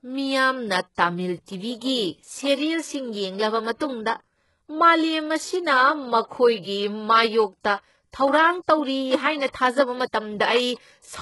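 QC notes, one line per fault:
Throughout: HE-AAC compression. The treble sounds synthetic and gritty, and nothing reaches above 11.5 kHz. The damage is heavy, likely from HE-AAC at a very low bitrate, around 12 kbps. Upper bands are copied from lower ones, so harmonics misalign and s sounds turn lispy.
0.95–0.98 s and 7.61–7.65 s: pre-echo. A short hiss arrives just before each sharp attack, spreading 31 ms and 39 ms. The attacks fall late in a transform block. The codec spreads noise sized for the loud onset across the quiet moment before it, softening each attack.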